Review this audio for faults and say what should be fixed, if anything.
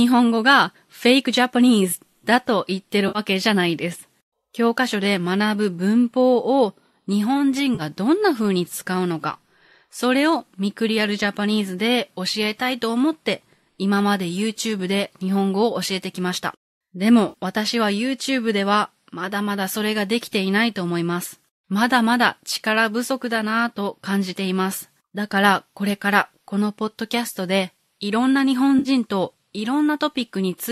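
Four short smeared, noisy, phasey patches interrupt the speech at 3.08 to 3.19 s, 7.75 to 7.82 s, 17.29 to 17.34 s and 28.79 to 28.89 s. This is AAC frame loss with concealment. Each time, 40 to 70 ms of audio went missing, and the decoder bridged the gap by rebuilding the last good spectrum with scrambled phase instead of leaving silence. The gaps fit the 10 ms frames of a likely low-delay AAC stream. Adding forward error correction or a deeper jitter buffer on the transport would stop these frames from being lost.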